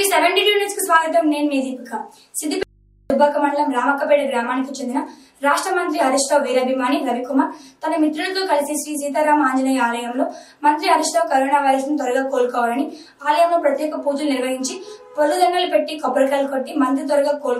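The audio has an audio dropout to a faint residue from 2.63 to 3.10 s: the signal cuts out abruptly for about 0.47 s, leaving only mains hum roughly 35 dB below normal level. This likely comes from a momentary signal loss upstream while the input stayed live.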